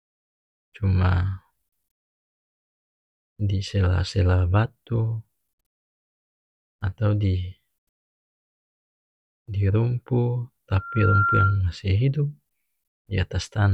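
Speech carries a loudspeaker feedback squeal from 10.74 to 11.62 s: a single tone near 1.4 kHz swells out of nothing over a little under half a second and ends up a few dB louder than the speech. The microphone is hearing its own loudspeaker, and at that frequency the loop gain tops one. That self-reinforcing growth sets it apart from a steady interference whistle, which would sit at constant level rather than climbing.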